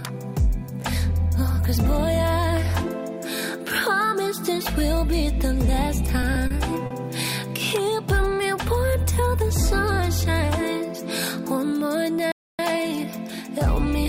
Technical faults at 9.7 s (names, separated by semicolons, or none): none